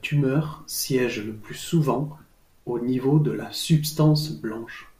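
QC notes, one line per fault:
0.35 s, 1.95 s, 3.39 s: compressed frames skipped. Each time the speech jumps ahead by about 20 ms, roughly two frames, which fits a 10 ms frame length.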